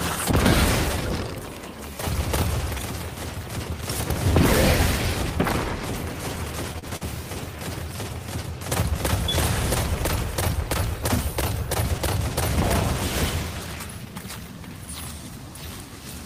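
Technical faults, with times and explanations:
6.79 s and 6.96 s, short stall from a late packet: twice in quick succession a packet was not there when due, the jitter buffer ran empty, and the receiver held the last sound in place, filling about 37 ms at 6.79 s and 49 ms at 6.96 s. Playback then resumed from the same point, so nothing is lost, but each spot has a brief held, slightly buzzy sustain, and the delay grows by the length of each fill.
13.50–13.76 s, jitter buffer speed-up: the buffer was holding more audio than its target, so the receiver cut short pitch-period-length pieces repeatedly across this quarter second, roughly 50 ms in all. Playback runs at about 114 % speed with pitch unchanged, which gives a short hurried stretch as the added delay is worked off.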